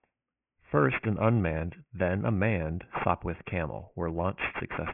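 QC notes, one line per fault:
Throughout, aliasing: the speech has a gritty, metallic edge on sibilants, and the spectrum runs hard up to 3 kHz, which fits a downsample to 6 kHz with no filter. Energy above 3 kHz folds back as unrelated tones, roughly 10 dB under the speech.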